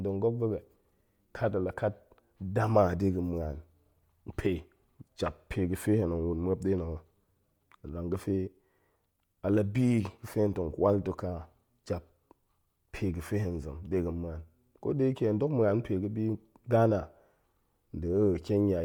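Throughout all of this speech recording, the upper spectrum has a breathy, grainy sheen where fine detail has been replaced by noise fill, the mark of Bluetooth LC3 compression, likely at around 48 kbps with 10 ms frames. Content reaches up to about 20.2 kHz rather than ending at a low, hard cutoff.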